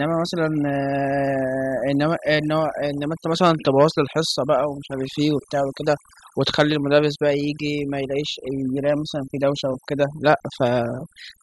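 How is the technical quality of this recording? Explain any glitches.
The recording is marred by overdone noise removal, present from start to finish. A noise reduction stage was pushed too hard, cutting individual frequency bands deep whenever they sat close to its noise estimate, and the softer parts of the speech were taken along with them. The pauses drop to near silence with sparkling specks. A noise gate would mute everything at once; here the residue twinkles band by band.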